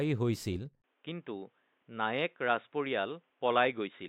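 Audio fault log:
0.82–4.09 s, input switched to a poorer device: at 0.82 s the speech drops out for about 20 ms, then continues dull and boxy to the end, with nothing above 3.8 kHz and a faint new background noise roughly 45 dB below the speech. Loudness stays about the same. The sudden narrowing of the band together with a different noise floor likely means the recording moved to a lower-grade microphone or a headset call profile.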